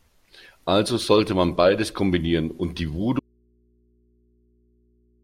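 At 3.20 s the speech cuts out abruptly and never returns. This is an audio dropout to a faint residue. Only mains hum remains, roughly 40 dB below the speech. The signal was likely lost upstream while the input stayed open and live.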